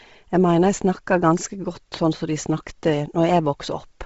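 A speech clip carrying heavy coding damage from start to finish, with a breathy, grainy edge on the voice. It is likely Bluetooth LC3 compression: the upper spectrum is discarded and refilled with noise, and the roughness fits a low rate near 24 kbps with 7.5 ms frames. On a spectrogram, energy stops at a hard ceiling around 7.7 kHz, and the band beneath it looks speckled and smeared rather than showing clean harmonic lines.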